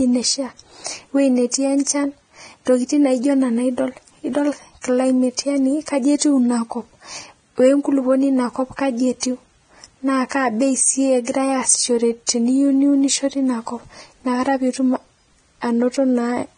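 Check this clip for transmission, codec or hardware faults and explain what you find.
One fault is present, and it runs through the entire speech recording: heavy lossy compression, likely Vorbis compression. Nothing is present above 9.7 kHz. What treble remains is quantised so coarsely that fine detail becomes noise-like grain, which points to a low bitrate around 22 kbps. The speech sounds hissy and grainy, with roughened tones and blurred consonant attacks.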